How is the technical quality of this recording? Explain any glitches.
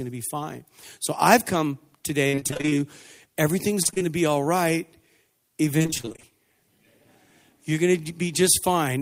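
The recording has three bursts of repeated packet loss (robotic sound): 2.27–2.81 s just after "I've come", 3.82–4.02 s just before "to be all right", and 5.78–6.32 s. In each burst, audio packets kept going missing, and the gaps were patched by stretching the preceding sound. Roughly half of each span is concealed fill, so the speech turns choppy with pieces missing. On a waveform, short flat or repeated stretches break up the envelope. A spectrogram shows smeared, frozen harmonic bands separated by hard vertical edges.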